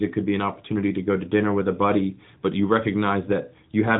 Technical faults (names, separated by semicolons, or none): none